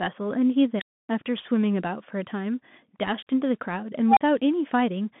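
The whole speech clip runs through a Bluetooth CVSD headset codec. The line sits roughly between 150 Hz and 3.5 kHz, nothing gets past 3.8 kHz, and the grainy hiss and scratchy sibilants fit 64 kbps CVSD, where a one-bit delta coder's step size can't keep up with sharp, loud detail.

At 0.76 s an unstable filter kicks in. A squeal somewhere around 4 kHz swells over about 52 ms, clips, then drops into roughly 280 ms of silence through 1.09 s. The recursive filter's feedback ran away until its numbers overflowed and it reset. It happens again at 4.08 s, this time a lower tone around 700 Hz building over about 84 ms, with a 40 ms gap before the sound returns at 4.21 s.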